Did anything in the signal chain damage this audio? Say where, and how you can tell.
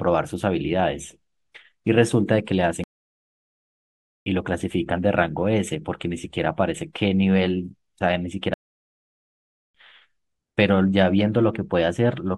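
Yes. There are two playback stalls, at the playback stage. The speech cuts to silence mid-flow from 2.84 to 4.26 s, about 1.4 s, and again from 8.54 to 9.75 s, about 1.2 s, then resumes each time. Gaps this long most likely mean the player's buffer ran dry or its output thread was blocked, so nothing was sent until the data supply recovered.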